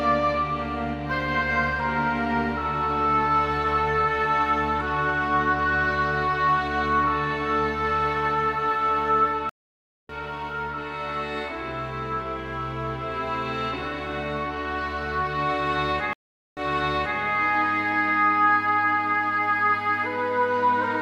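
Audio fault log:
9.49–10.11 s, stream reconnect: the connection dropped, leaving 0.6 s of silence, then a fresh decoder picked up mid-stream, so the sound jumps roughly 0.7 s ahead.
16.13–17.19 s, stream reconnect: 0.44 s of silence, then playback resumes 0.62 s earlier, repeating a stretch as the server resent already-delivered audio after reconnecting.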